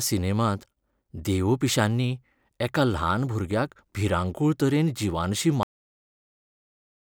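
At 5.63 s, right after "भुरग्याक भिरांकूळ तरेन जिवानशीं", the speech has a cut-off end: the final stretch of audio was never written out, so the recording stops mid-sound and falls straight to digital silence for the remaining 1.4 s or so. Unlike a natural ending or a fade-out, there is no decay or tapering at all, and unlike a mid-stream dropout, the sound never returns.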